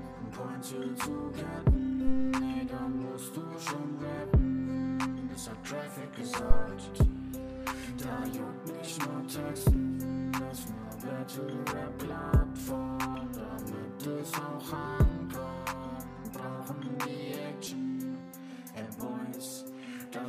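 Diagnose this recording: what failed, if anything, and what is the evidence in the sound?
The failure is in the analogue input stage: a phantom power thump, heard twice. The first runs from 2.07 to 2.35 s, peaks at about -17 dBFS and dies away in 63 ms. The second, from 6.51 to 6.67 s, is louder, at about -8 dBFS, with a 38 ms decay. Each is a deep, low thud. A supply was switched on or off on the live input, and its sudden voltage step crossed the coupling capacitors.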